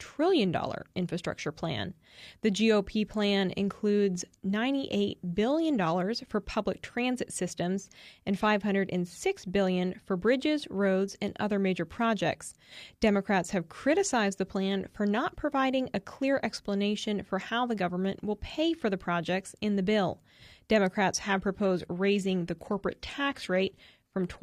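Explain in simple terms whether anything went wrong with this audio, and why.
At 21.16 s the adaptive stream drops to a lower bitrate after the connection slowed. Speech abruptly turns duller and more synthetic until the end, without any gap.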